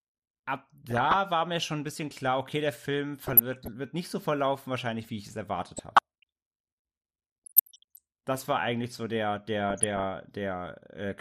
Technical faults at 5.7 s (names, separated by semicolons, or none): MP2 compression; DAB burbling